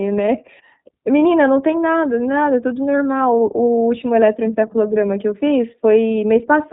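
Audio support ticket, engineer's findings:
iLBC codec, whole clip (0 to 6.7 s). Speech narrowband, rough, slightly synthetic. Spectrogram: hard ceiling at 4 kHz, nothing above. Excitation coded per frame independently, fitting 20 ms frames at about 15.2 kbps; codec damage plainly audible. Component: VoIP narrowband encode stage.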